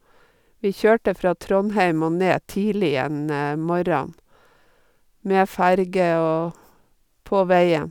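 Listening to this speech recording, nothing stood out as a technical problem anywhere in it.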